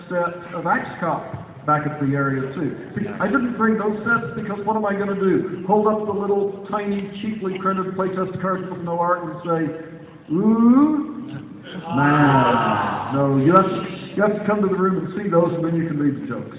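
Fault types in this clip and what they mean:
No audible faults turn up anywhere in the recording.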